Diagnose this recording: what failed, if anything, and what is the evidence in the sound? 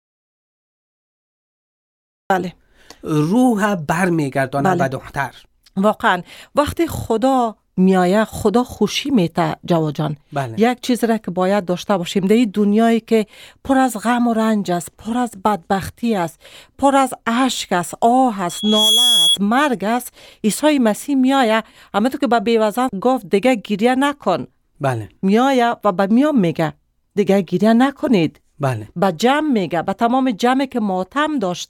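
The clip opens in an audio dropout to silence that is already under way and lasts until 2.3 s. The gap is silent with no room tone, so the input was likely disconnected or muted at the interface while the recorder kept writing samples.

A loudspeaker feedback squeal appears from 18.49 to 19.38 s as a single 3.3 kHz tone that swells in under half a second to about 5 dB above the speech. The microphone is picking up its own loudspeaker, and loop gain exceeded unity at that frequency.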